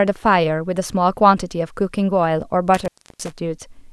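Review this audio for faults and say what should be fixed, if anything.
Intermittent contact from 2.74 to 3.33 s: a loose cable or plug briefly loses connection, so the speech drops out for about 317 ms with crackle at the edges, leaving faint hiss while the line is open. Reseat or replace the connector and secure the cable before recording.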